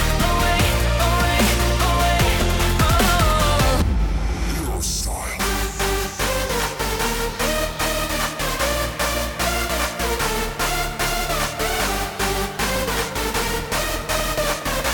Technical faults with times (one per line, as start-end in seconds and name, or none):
12.58-14.86 periodic USB or driver dropouts